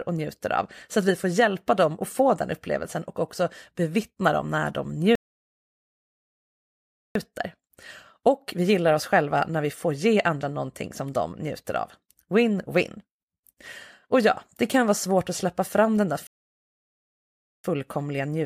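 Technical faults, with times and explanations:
5.15 to 7.15 s: playback stall. The speech cuts out just after "bevittna dem när de" and stays silent for 2 seconds. It then resumes. The likely cause is the player running out of buffered data or its thread being blocked, so output simply stopped.
16.27 to 17.64 s: playback stall. After "släppa fram den där" the sound halts for about 1.37 seconds of silence before speech continues. Output dropped mid-flow while playback waited to recover, not because the speaker paused.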